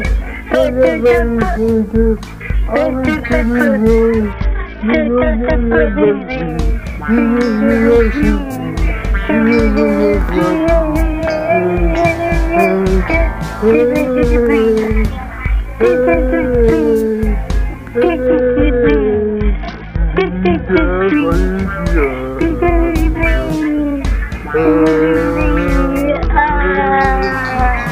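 Throughout the audio, the signal was likely reduced to a coarse word length and truncated without dither, consistent with about 8 bits. Because the rounding error tracks the signal instead of being spread into steady hiss, it sits roughly 40 dB below the material as a grainy, signal-dependent distortion that roughens quiet passages and makes the faintest tails crackle between adjacent steps. Three times, from 4.32 to 6.49 s, 18.27 to 21.14 s and 26.09 to 27.01 s, a Bluetooth SBC bit pool drop occurs. The sending device cut its bit allocation sharply, which fits a fall from a bit pool of 31 to 7, or about 61 kbps. The highest sub-bands are starved, so the treble turns dull and muffled, while the remaining bands are quantised so coarsely that a gritty noise rises over the sound. Each episode ends when the rate recovers.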